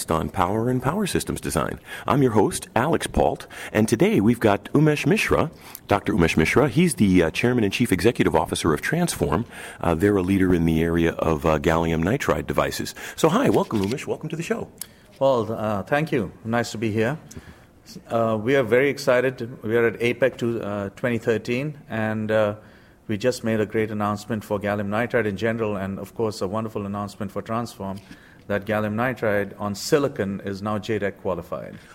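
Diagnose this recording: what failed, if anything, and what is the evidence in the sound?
No stage in the chain, from wiring and conversion through buffering, processing, transmission and playback, has left any audible failure in this recording.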